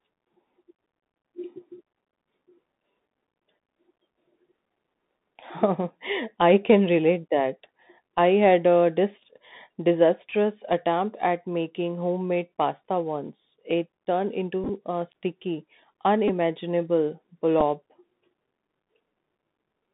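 Bluetooth CVSD headset codec runs through the whole speech clip. The line passes only about 150 Hz to 3.7 kHz, and the sound fits 64 kbit/s CVSD, which codes each sample as a single up-or-down step whose size adapts. The damage is plainly audible. Fast, loud high content outruns the step and distorts, sibilants turn scratchy, and a fine granular hiss sits beneath the speech.

Bluetooth headset packet repeated first occurs from 14.64 to 14.69 s, just before "a sticky". About 26 ms of audio is missing, scattered over roughly 52 ms, and the longest unbroken run is about 15 ms. Each missing packet is filled by decoding the previous packet's bits again, so the 3.75 ms repetition makes a brief buzz near 267 Hz. It recurs as a short buzzy tick at 16.28 s, where the gap fits about three packets, and as a single small tick at 17.61 s.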